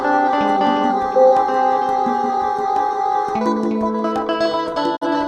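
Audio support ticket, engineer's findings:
Music cuts out near the end, 4.95 s to 5.07 s. Quick fade to silence over about 20 ms, then a hole, then the music returns. Component: digital receiver and decoder. Fault: digital broadcast dropout. Frame failed its checksum or the signal was lost, so the decoder muted until good frames arrived. The gap fits a single lost frame of about 43 ms. Material in the gap is gone.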